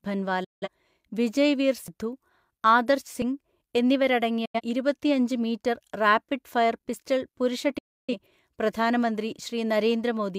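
Three short silences break up the speech, each entered through a very quick fade of about 8 ms: at 0.44 to 0.68 s, 4.45 to 4.61 s, and 7.78 to 8.14 s. These are digital broadcast dropouts, where the receiver muted while corrupted or missing frames went by, losing roughly 171, 85 and 299 ms of audio, which fits whole frames being discarded. At 1.88 s there is an abrupt jump with no gap, as though around 70 ms were skipped. A dropped buffer (overrun) is the likely cause, where unread samples were overwritten and the two edges were spliced together.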